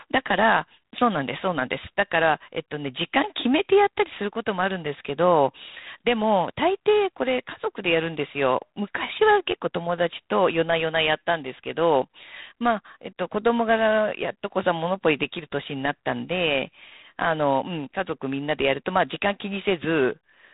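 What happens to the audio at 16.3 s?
At 16.3 s the speech carries G.726 ADPCM damage that runs through the whole clip. Coarse quantising of the prediction error leaves a harsh, rasping hiss tracking the speech level, which points to the 24 kbit/s mode, and nothing passes above 3.8 kHz.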